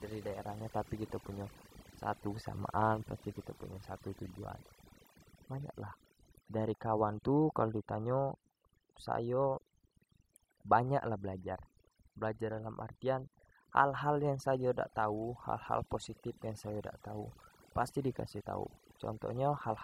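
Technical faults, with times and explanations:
Throughout: overdone noise removal. Aggressive noise reduction deletes frequency bands near the noise floor, leaving twinkling specks in silence.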